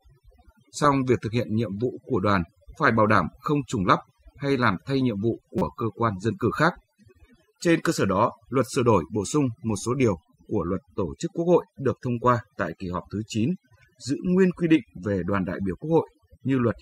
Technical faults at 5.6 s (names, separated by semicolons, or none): overdone noise removal; corrupt frame decoded